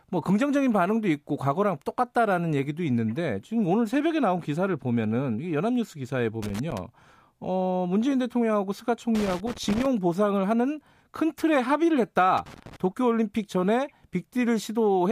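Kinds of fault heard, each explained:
Loose connector crackle: A worn or dirty contact in the signal path is making and breaking as it shifts. Each break chops the speech, and the sudden jumps come through as scratchy crackle. The bursts are irregular, not steady noise. Here it happens three times: from 6.42 to 6.80 s, from 9.15 to 9.86 s, and from 12.37 to 12.76 s. The middle burst is the longest, at about 0.7 s.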